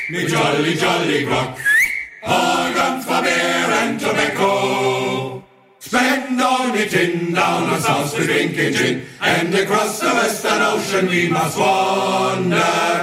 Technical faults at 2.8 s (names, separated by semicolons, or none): dropped buffer (overrun)